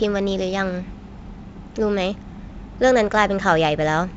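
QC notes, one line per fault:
No faults found.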